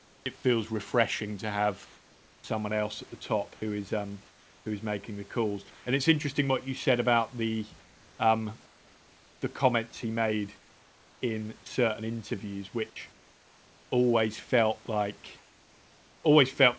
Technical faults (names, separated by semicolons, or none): comfort noise in place of the background; sound dropped by the voice detector